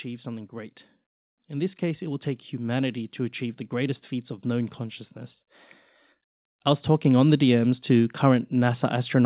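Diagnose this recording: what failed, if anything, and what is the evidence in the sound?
The failure is in call processing, where the automatic gain control rises twice. From 1.34 s to 5.46 s, just after "something great", the level climbs slowly by about 6 dB, with the voice and the background noise swelling together. A second rise starts at 7.02 s, after "I was", and continues to the end. The AGC judged the input too quiet and kept raising its gain. All of this sits inside the G.711 mu-law band, which stops at 4 kHz.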